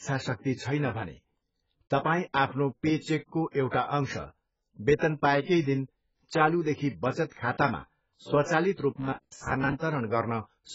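Throughout the speech, everything above 7.7 kHz is missing, and what remains sounds dull and smeared, with a warbling, fizzy texture. This heavy damage likely comes from AAC compression at a very low bitrate, around 12 kbps. Unlike a plain low-pass filter, the damage also sits inside the remaining band as warble.

From 9.01 to 9.73 s the speech becomes a rigid, metallic buzz at 66.7 Hz, robotic sound from repeated short buffers. A segment of about 15 ms is likely replayed over most of that stretch while real audio is skipped. Its fixed repetition rate sets it apart from the constant, shifting warble of the codec.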